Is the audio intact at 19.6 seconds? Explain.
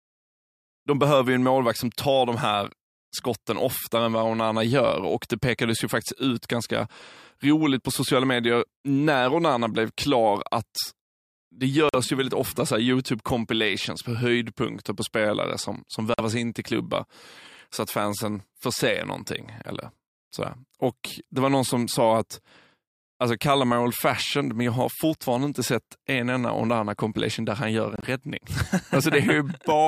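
Yes, the speech at 19.6 seconds is intact, with no dropout, click, distortion or other fault at that moment.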